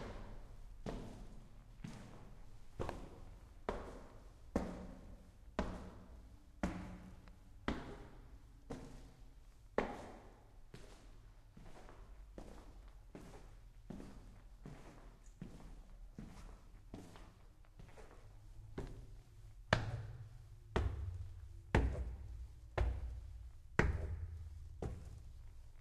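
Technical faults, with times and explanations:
20.83–20.85 s, corrupt frame concealed: one frame, about 24 ms, was damaged. The decoder caught damaged data and masked it, which fits a single bad frame.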